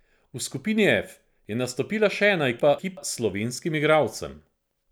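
A speech recording with one timing fault: chunks out of order. Right after "je nastopila še ena", from 2.60 to 2.97 s, the audio jumbles briefly. Two blocks of about 186 ms each have swapped places. One chunk arrived or was written one slot late, so it plays after the chunk that should follow it. No audio is lost. The wrong order creates three hard joins.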